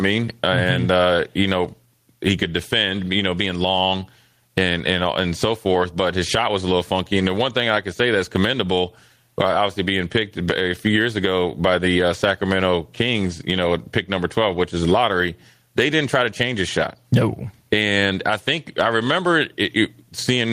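Gain pumping runs through the whole speech recording. The input gain was likely set far too high, so a fast limiter or compressor clamps down on every loud syllable and releases in the pauses, swinging the level by around 15 dB. Loud and soft parts end up closer in level, and everything sounds squashed. On a waveform the peaks look flattened to a near-constant ceiling.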